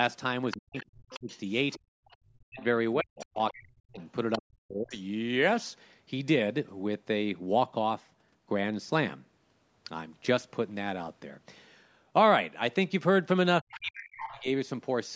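Speech recorded through a call's microphone path, its spectrum ending at 8 kHz, with echo-canceller trouble at the start and near the end. The other side's voice leaking through appears at 0.51 to 2.64 s, 3.2 to 4.37 s and 13.69 to 14.42 s, roughly 20 dB below the talker (nearer 15 dB in the last stretch). It is likely residual loudspeaker echo and shows as faint harmonic traces under the speech. Speech suppressed in double talk, likely the canceller clamping both voices at once, cuts the talker from 0.55 to 1.29 s, 2.19 to 4.97 s and 13.62 to 14.48 s. It leaves waveform gaps and spectrogram holes up to about 40 dB deep. Background gated by the echo canceller drops the room sound by about 32 dB from 1.8 to 1.91 s, a brief blank column in the noise floor.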